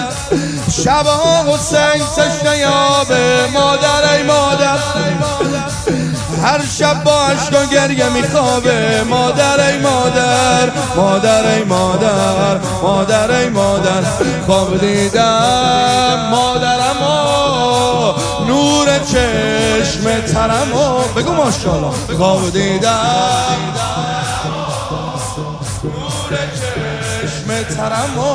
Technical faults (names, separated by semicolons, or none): none